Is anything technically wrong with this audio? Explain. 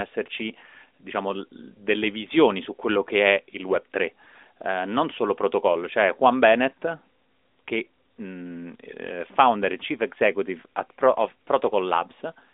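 No, nothing here is technically wrong.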